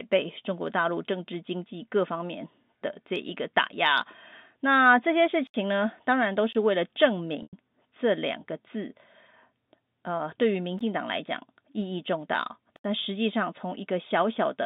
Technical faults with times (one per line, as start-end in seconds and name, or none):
5.47-5.54 block of digital silence
6.53-6.55 block of digital silence
7.43-7.53 packet loss with pitch repetition
10.79 block of digital silence
12.76-12.84 block of digital silence